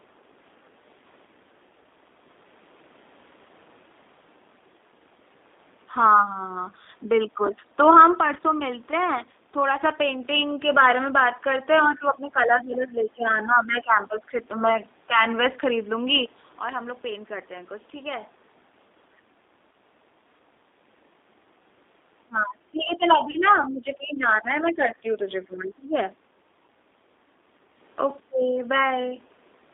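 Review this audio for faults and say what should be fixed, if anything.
The G.729 codec is present throughout: speech is limited to about 250 Hz to 3.7 kHz, with a rough, synthetic texture that fits 8 kbit/s pulse-excited coding. Prevent it by using a wideband codec such as G.722 or Opus.

VoIP packet loss, concealed by the speech codec, occurs from 23.31 to 23.38 s. About 30 ms is missing, and the decoder extends the last pitch and filter with fading gain before recovering. Prevent it with forward error correction or redundant packets and network QoS prioritisation.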